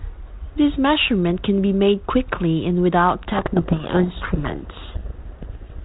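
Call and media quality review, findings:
Harsh, rasping distortion burying the speech from 3.28 s to end, right after "made quickly and without". Codec payload misread: G.726 32 kbit/s code words unpacked in reversed bit order.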